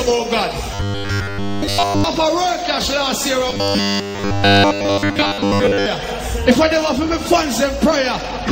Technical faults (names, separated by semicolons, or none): robotic sound from repeated short buffers